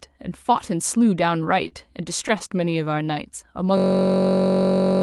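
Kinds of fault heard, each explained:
Short stall from a late packet: At 1.68 s a packet arrived late and the jitter buffer ran dry. The receiver held the last bit of speech for about 37 ms, up to 1.74 s, then carried on from the same point. No audio is lost. The sound is simply drawn out, with a slight buzz or dip. Playback runs about 37 ms later from then on.
System hang loop: From 3.78 s to the end, the computer or driver stopped feeding the sound hardware, which kept replaying the same ring buffer. One 21.33 ms slice repeats over and over, which fits a 512-sample buffer. At this short length the repeats merge into a steady buzz at about 46.9 Hz. It replaces the speech until the clip ends.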